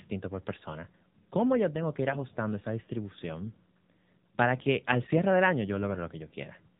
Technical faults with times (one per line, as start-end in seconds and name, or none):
0.00-6.79 AMR narrowband mobile codec